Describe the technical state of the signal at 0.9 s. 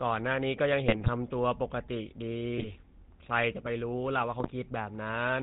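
At 0.9 s the speech is inside a burst of GSM bit errors, running from 0.88 to 1.09 s. Corrupted filter, pitch and gain values reach the decoder. The spectrum warps and the level jumps. The voice squawks, pops and gargles across about ten 20 ms frames.

Underneath, the GSM full-rate codec colours the whole clip, which fits a 13 kbps full-rate stream. The vocal tract is modelled and driven by sparse regular pulses. Nothing passes above 4 kHz. The voice sounds plainly buzzy and gravelly.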